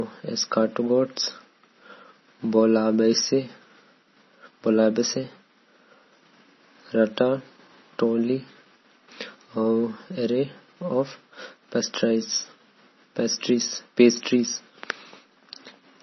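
Throughout the speech, MP3 compression at a very low bitrate, likely around 24 kbps, strips everything above 5.9 kHz and leaves a watery, swirling tone with metallic chirps on s sounds. A spectrogram shows a hard ceiling at 5.9 kHz and patchy, flickering gaps below it.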